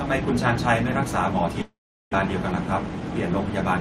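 At 1.61 s the speech stops and its last sound is stretched into a fading buzz, then gives way to near silence until 2.15 s, when talk resumes with about 0.4 s of material gone and timing shifted by roughly a tenth of a second. This is a long network dropout, likely packets lost in transit, which the receiver tried to conceal. A spectrogram shows a smeared, decaying band followed by an almost empty gap of about 0.39 s.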